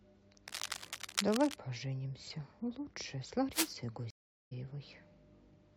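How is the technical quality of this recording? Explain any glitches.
The recording has clear technical faults: two bursts of crackling and one dropout where the speech jumps ahead.

From 0.48 to 1.54 s, and again from 3.52 to 3.74 s, there is cable scratch noise. This is likely a worn cable or connector being moved, making its contact resistance flicker and inject ragged noise. It sounds like scratching over the speech, roughly 5 dB below it in the first burst and about as loud as it in the second. On a spectrogram it shows as dense, broadband vertical speckle. The waveform shows jagged spikes riding on the signal.

From 4.10 to 4.53 s there is a stream reconnect. The connection dropped, playback fell silent for 408 ms, and a fresh decoder picked up the stream further on, so the speech resumes roughly 200 ms later than where it stopped and a fragment is lost. The waveform shows a flat gap followed by a restart that fades in. 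The spectrogram shows a blank column, with the speech continuing out of step on the other side.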